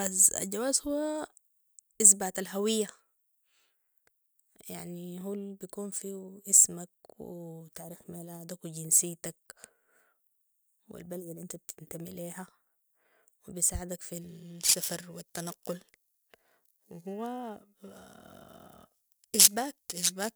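Periodic clock jitter from 14.21 s, after "وبيساعدك في", to the end: a roughly 2 kHz clock wobble adds sidebands, for a rough, metallic edge.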